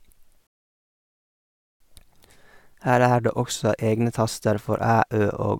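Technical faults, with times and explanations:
0.47–1.80 s, rebuffering stall: the speech halts into silence for about 1.34 s, then picks up at exactly the point where it stopped, because playback ran dry and waited for more data. Unlike a dropout, nothing is skipped; the pause only adds time.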